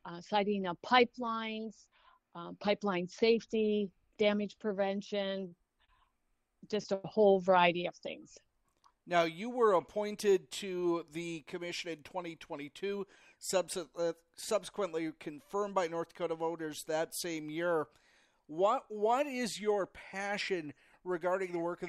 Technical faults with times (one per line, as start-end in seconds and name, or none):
5.47-5.52 short stall from a late packet
5.85-5.89 short stall from a late packet
6.94-7.05 short stall from a late packet
11.89-12.84 jitter buffer speed-up